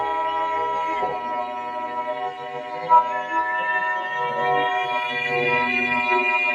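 Throughout, overlap-add ripple appears: frames were rejoined with uneven overlap gain, so the level dips about 11 dB around 300 times a second, giving a metallic buzz and a finely combed waveform envelope. Also throughout, a noise suppressor applied to music or sounds mistakes held tones and tails for noise, pulling them down by around 10 dB. The sound pumps and thins, and the spectrogram shows sustained energy fading after each attack.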